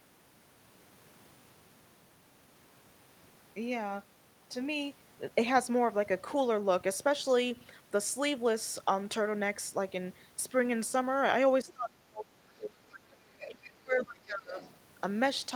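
A speech recording in which, from 11.63 to 14.59 s, the talker's voice sinks by as much as about 30 dB, which is speech suppressed in double talk, likely from an echo canceller that ducked both sides. Faint scraps of another voice surface at 13.40 to 13.49 s and 14.60 to 14.77 s, about 15 and 25 dB below the speech. This is the other side's voice leaking through, likely loudspeaker echo that the canceller did not fully remove.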